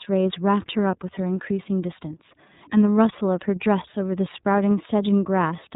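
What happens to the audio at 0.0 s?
From 0.0 s the speech carries iLBC codec damage that lasts the whole clip. Each 30 ms frame's excitation is coded independently, which fits the 13.33 kbps mode, and nothing above 4 kHz survives, so the sound is band-limited and plainly rough and synthetic.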